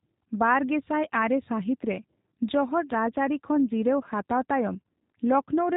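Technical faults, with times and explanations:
Throughout, G.729 codec: the speech has that narrow, boxed-in telephone quality, with nothing above about 3.8 kHz, so sibilants and breathiness are gone. On top of that there's a plainly audible roughness and slightly synthetic edge. That's what you get when the voice is rebuilt from a vocal tract filter, a pitch predictor and a handful of pulses every 10 ms rather than sent as a waveform, and it fits a G.729A link at 8 kbit/s.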